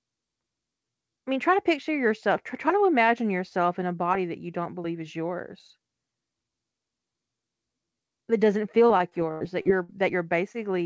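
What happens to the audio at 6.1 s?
Nothing goes wrong at 6.1 s: the speech carries straight through that moment with no dropout, glitch or distortion, just the steady band-limited sound of a G.722 call path with nothing above 8 kHz.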